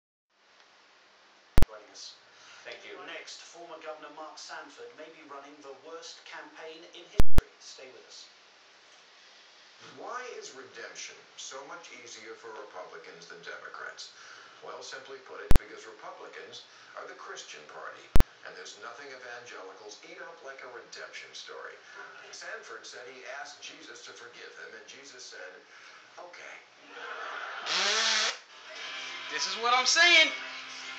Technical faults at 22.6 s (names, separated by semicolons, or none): none